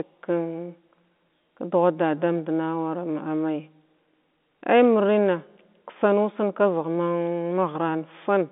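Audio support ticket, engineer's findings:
No faults found: the speech sits in a telephone band of roughly 200 Hz to 3.6 kHz, consistent with a G.711 A-law path at 64 kbps, with any coding damage faint at most.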